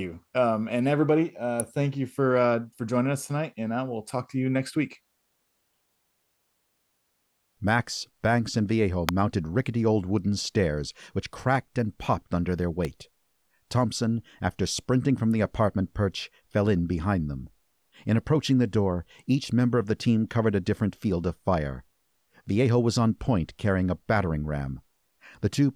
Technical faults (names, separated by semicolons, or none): electrical switching spike